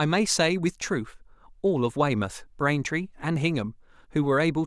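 No technical faults are audible.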